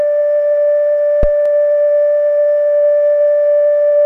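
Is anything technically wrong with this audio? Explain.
Yes, there are two faults in this music clip.

From 1.23 to 1.31 s there is a deep, blunt thump underneath the music that dies away quickly, decaying in about 17 ms. This is a phantom power thump. A supply was switched on or off on a live input, and that sudden DC step passed through the coupling capacitors as a low-frequency pulse before the circuit settled.

At 1.46 s a single sharp click cuts through, a thin vertical line across the spectrum with no audible gap in the music. This is most likely dropped samples. The waveform jumps abruptly from one value to a later one, which fits the loss of only a few samples, well under a millisecond, far too brief to remove any sound but enough to create a discontinuity.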